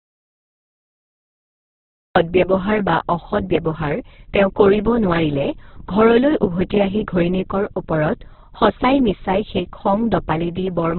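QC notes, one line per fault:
throughout: Opus compression, heavy. Nothing is present above about 4.2 kHz, so the speech sits in a narrowband and has lost its air and sibilance. Tones come out noisy, rough and grainy rather than swirling, because bands starved of bits are filled with folded or noise content instead of being left empty. That grain, with few spectral holes, separates it from MP3 artefacts. The sound points to Opus in its music mode at a very low rate, around 8 kbps.
0.00–2.16 s: audio dropout to silence. The gap is already under way when the clip begins, and the speech comes in abruptly at 2.16 s. Up to then there is dead silence with no room tone at all, which separates it from a natural pause or a gated quiet stretch, where some background would remain. The likely cause is lost input, through a disconnected device, a failed link or an accidental mute, while recording carried on writing silence.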